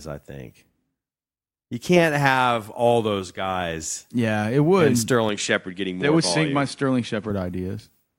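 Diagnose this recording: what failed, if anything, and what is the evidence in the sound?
From 5.29 s to 7.30 s the speech turns duller. Nothing remains above 10.9 kHz. A faint new noise floor appears, about 45 dB down. Level holds and no gap marks the change. The likely cause is an input switched to a poorer device at the driver stage.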